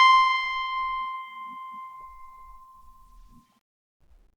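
The clip is a short piece of music with nothing technically wrong to report. No fault can be heard anywhere in it.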